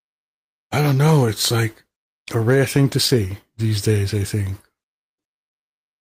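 Clock drift between sender and receiver runs through the whole clip. The sender's clock is roughly 4 percent slow, so the receiver keeps running short of audio rather than piling it up.

From 0.82 to 5.22 s come repeated timing corrections. The receiver repeats short pieces, playing at 97 percent speed and adding around 150 ms in total. Nothing is skipped.

At 2.04 to 2.09 s a short stall from a late packet holds the current sound for 32 ms. Playback then resumes exactly where it stopped, losing nothing, unlike a dropout.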